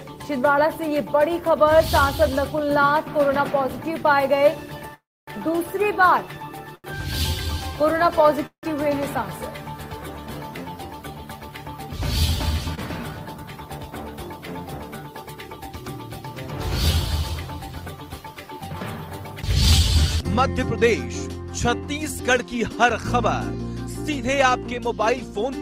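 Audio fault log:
4.91–8.65 s, scattered short gaps: about three small holes, the longest roughly 150 ms, are bridged by continuing the preceding sound, leaving brief ticks and smears.
4.94–5.29 s, call audio freeze: the sound stalls into a fading continuation, then about 260 ms of silence, and resumes 334 ms later; likely delayed packets draining the jitter buffer.
12.75–12.79 s and 13.38–13.40 s, short concealed packet loss: about 20 ms never arrived each time, so the receiver extrapolated the previous sound, producing a brief smear or wobble.
13.11–15.62 s and 19.42–25.42 s, jitter buffer speed-up: the receiver trimmed pitch-period slices to shed excess buffered delay. The sound runs at 106% speed with about 150 ms removed, then at 101% with about 50 ms removed, with pitch unchanged.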